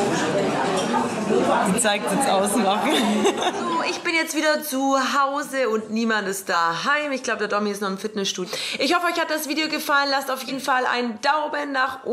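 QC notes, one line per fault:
2.07, 3.37, 6.53, 8.43 and 10.47 s, compressed frames skipped: the sound jumps ahead, losing roughly 500, 150, 100, 300 and 150 ms. Whole frames went missing or were rejected, so playback skips past them. Jump sizes suggest a frame of about 46 ms.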